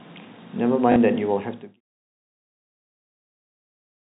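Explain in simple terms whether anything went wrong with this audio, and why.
One problem stands out: packet loss with last packet repeated, between 0.92 and 0.96 s. For about 40 ms the audio stops moving forward and the same tiny slice of speech plays again, which fits two lost 20 ms packets. The gap comes out as a brief robotic stutter. The later fade-out, ending at 1.81 s, is smooth and deliberate.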